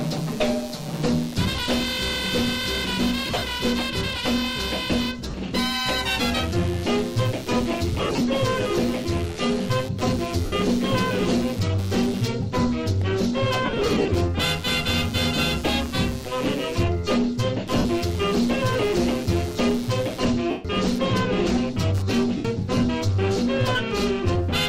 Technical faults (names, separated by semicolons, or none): computer activity noise; lost LE Audio frames